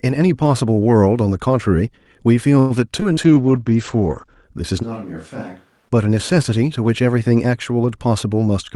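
A speech clip with a dense cluster of network and capture faults between about 2.6 and 5.9 s. From 2.59 to 2.73 s there is a call audio freeze, likely from packets held up so the jitter buffer ran dry: about 106 ms of fading buzz or hiss is inserted, visible as a smeared, decaying band, and the speech resumes without loss. At 3.00 to 3.04 s a skip ahead drops roughly 70 ms, and the waveform shows two segments butted together almost directly. From 3.13 to 3.20 s, short concealed packet loss patches about 60 ms of missing audio with a brief smear that looks blurred on a spectrogram. A call bitrate drop from 48 to 12 kbps runs 3.24 to 4.50 s, with the lowest rate held about 1.1 s. The audio turns coarse and muffled, and the spectrogram top falls from 20 kHz to 8 kHz. Overlapping it, from 3.27 to 3.70 s, a jitter buffer slow-down repeats pitch periods, adding 69 ms. The audio plays at 86% speed at unchanged pitch, and stretched, evenly repeated cycles show in the waveform. 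From 4.84 to 5.88 s, a switch to a distant microphone, likely after the close microphone's signal failed, makes the sound abruptly roomy and thin. The waveform steps down about 10 dB, and the spectrogram shows weaker lows and a raised noise floor roughly 30 dB below the speech.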